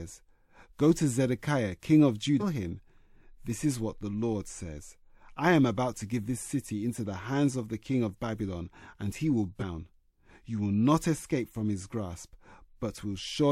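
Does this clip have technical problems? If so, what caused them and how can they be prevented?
Yes. Compressed frames were skipped at about 2.39 to 2.43 s. The audio jumps forward by roughly half a second, which fits about ten missing 46.4 ms frames that were absent from the file or rejected by the decoder as damaged. Unlike a dropout, there is no silent gap, just a sudden leap ahead. To prevent this, verify file integrity after transfer and use error-protected storage or transmission.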